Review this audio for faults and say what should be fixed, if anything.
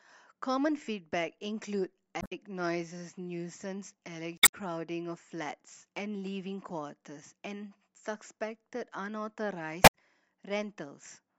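Short glitches break into the speech at 2.18–2.32 s, 4.35–4.54 s and 9.83–9.94 s. These come from damaged data in a compressed stream: corrupted bytes make the decoder misread those frames and lose sync until it finds the next valid frame header. Prevent this by transferring and storing files with checksum verification, so damaged copies are caught and replaced before playback.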